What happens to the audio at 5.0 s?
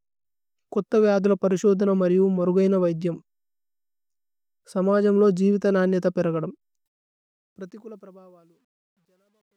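Nothing goes wrong at 5.0 s; the audio runs intact through that moment with no dropout, click or distortion.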